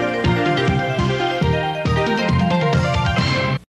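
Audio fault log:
0.98 s and 3.55 to 3.58 s, damaged data in a compressed stream: two brief glitches, the first shorter than 20 ms and the second about 21 ms, each heard as a chirp, squawk, click or short hole. At these points part of the compressed data was corrupted, so the decoder misread or rejected the affected frames, lost its place in the stream, and had to hunt for the next valid frame header before clean playback could resume.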